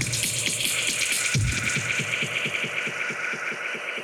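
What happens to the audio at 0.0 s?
Nothing goes wrong at 0.0 s; the audio is intact at that point.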